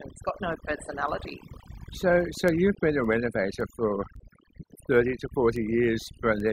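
From the start the speech plays over near-silent, twinkling background, overdone noise removal that cut quiet voice detail along with the noise bands. From 0.25 to 6.40 s, sharp ticks recur about every third of a second, around twenty in all. These are word clock ticks, which fit an unlocked receiver drifting by roughly 70 ppm and slipping a sample each time.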